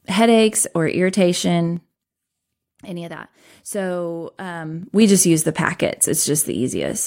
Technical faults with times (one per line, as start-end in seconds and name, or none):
1.67-2.04 zipper noise
4.55-5.11 zipper noise